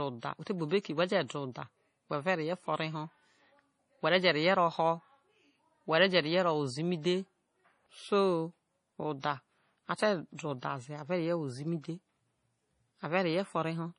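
Heavy MP3 compression, likely at a very low bitrate around 32 kbps, runs through this whole speech recording. The encoder has cut everything above 10.5 kHz and left too few bits for weak detail, so the sound turns watery and swirly, with chirpy s sounds and smeared attacks.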